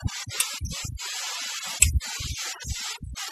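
Across the whole clip the background drops and breaks up into twinkling specks. This is overdone noise removal: the reduction was set so strong that bands near the noise estimate were pulled down or removed, taking quieter parts of the speech with them.

At 0.77 s and again at 3.18 s there is a brief blip, each lasting only a split second. These come from damaged data in a compressed stream, where corrupted bytes led the decoder to misread frames and lose sync before finding the next frame header.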